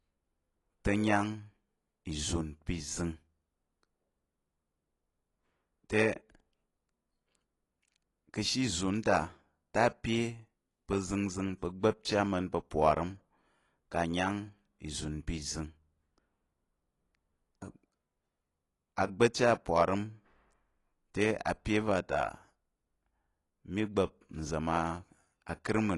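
Speech in which, throughout, nothing remains above 11.5 kHz and the damage is plainly audible: dull, smeared sibilants with a warbling, fizzy texture. It is likely AAC compression at a low rate, fitting about 32 kbps. Unlike a plain low-pass filter, it leaves holes or noise-filled bands and swirling artefacts in the remaining band.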